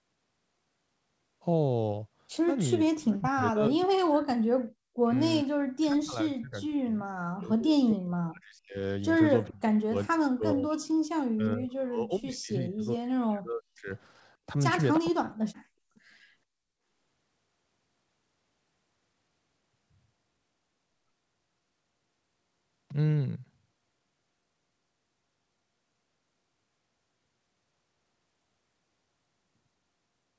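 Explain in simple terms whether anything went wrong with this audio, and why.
Speech suppressed in double talk happens at 2.84–4.37, 5.01–5.10, 5.43–8.79, 9.5–10.83, 11.33–13.91 and 15.1–15.33 s, where the voice sinks almost to silence. Both sides were likely talking at once, and the echo canceller, unable to tell this talker from the loudspeaker's echo, turned everything down.

An echo leak follows at 15.95–16.0 s: a very faint, brief copy of the voice arrives about 0.43 s late. The other end's loudspeaker sound likely reached its microphone, and its echo canceller let this scrap slip back.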